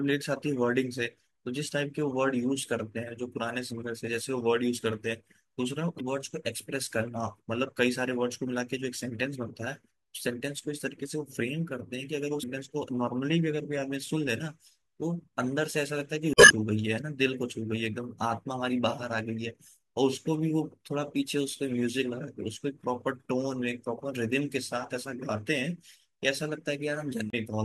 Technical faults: damaged data in a compressed stream

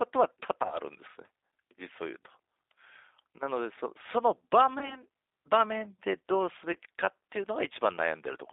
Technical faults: G.729 codec; VoIP packet loss concealed by the speech codec

